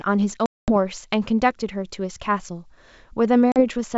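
Speech clip with packet loss on an ADPCM call: hard silent gaps at 0.46–0.72 s (220 ms, about ten packets) and 3.52–3.62 s (40 ms, a couple of packets), each followed by briefly distorted speech as the decoder's predictor resynchronises. The G.722 wideband path itself adds at most faint coding damage.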